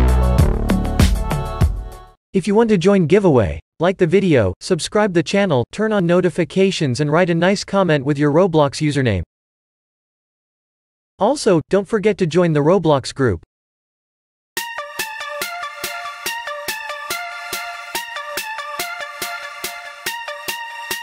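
Nothing goes wrong anywhere along the way, so there's no technical fault to point to in this audio.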